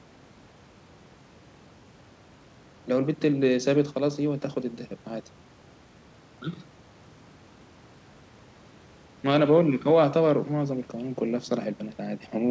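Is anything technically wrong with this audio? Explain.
No, the speech shows no faults, and the band ending at 8 kHz is simply the normal top end of the wideband call codec it passed through, which sounds consistent with G.722.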